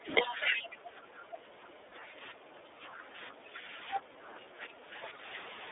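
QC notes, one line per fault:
Throughout: iLBC codec. The sound is confined to a narrow telephone band of about 250 Hz to 3.6 kHz, so it is thin at the bottom and has no air or sibilant brightness on top. Each frame's excitation is coded on its own, and the result is a plainly audible rough, slightly synthetic grain on the speech. The frame behaviour fits iLBC's 30 ms, 13.33 kbps mode.
0.49–3.68 s and 3.99–5.23 s: speech suppressed in double talk. Over roughly 3 s in the first span and 1 s in the second, the speech level pumps down by around 10 dB at its deepest. The likely cause is an echo canceller or suppressor that took the talker for loudspeaker echo while the far side was speaking and attenuated both.
1.89–1.93 s: lost iLBC frames. A single 30 ms frame drops out. The decoder fills it by repeating the last pitch period blended with noise, which gives a brief held, faintly buzzy vowel-like smear instead of a gap. 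Because iLBC frames decode independently, the next frame restores the speech almost immediately and no artefact carries past the loss. This event sits inside the first double-talk span.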